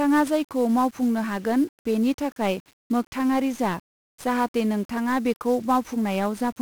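Throughout the speech, 1-bit DFPWM compression leaves heavy damage: each sample keeps a single bit nudging an adaptive level, so dense broadband fuzz and crackle ride the voice, burying treble in hiss. The hiss tracks the signal, which separates it from steady background noise, and the grain fits roughly 48 kbps.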